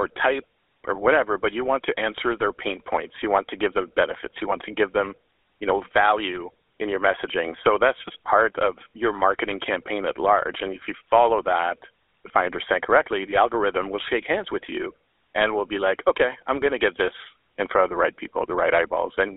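Speech with a buzzy, gravelly roughness throughout, squeezed into a 300 Hz to 3.6 kHz band: GSM full-rate coding, pulse-excited vocal-tract modelling that fits a 13 kbps channel.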